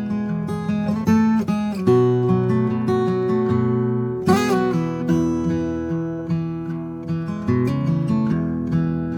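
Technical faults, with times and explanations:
No technical faults can be heard in this music, so there are no times or explanations to give.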